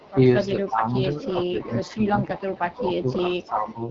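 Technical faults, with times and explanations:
Throughout: AMR wideband (HD Voice) codec. The call was carried by AMR-WB at 8.85 kbit/s, the second-lowest rate the codec offers. At this rate the pulse-driven vocal tract model has too few bits to follow the voice faithfully, so the speech comes across rough and raspy, with plainly audible coding damage. The band stops at about 7.6 kHz, and the top end above the modelled range is filled with shaped noise rather than real detail.
0.00–0.12 s, 0.47–2.77 s and 3.29–3.82 s: echo leak. A faint delayed copy of the voice trails the original by 327 ms, roughly 25 dB down in the first brief scrap and around 20 dB down in the two longer stretches. The likely cause is a loudspeaker on one end whose echo canceller failed to remove all the sound its microphone picked up, so the remainder was sent back down the line.
0.52–3.81 s: speech suppressed in double talk. 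Across this span the talker's level sinks in patches, by as much as 10 dB at the deepest point, adding up to about two seconds of affected audio. With both ends active together, the echo canceller likely could not tell its own talker from the returning loudspeaker echo and turned both down, which is why the voice dips.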